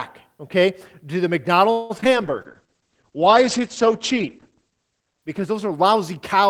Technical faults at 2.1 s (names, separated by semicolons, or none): repeated packet loss (robotic sound)